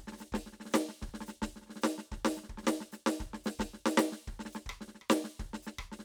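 Nothing stood out on listening to this piece of music.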